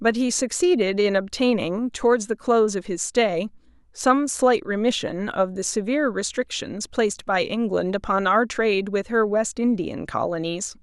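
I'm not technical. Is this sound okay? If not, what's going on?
No. Near the end, at about 9.84 s, there's a brief patch of DAB burbling. A weak digital radio signal let a small number of data errors slip past the receiver's error correction into the audio data. Those errors put short blips of noise into individual frequency bands, which fits a handful of damaged audio frames. You hear it as a few quick watery blips laid over the speech.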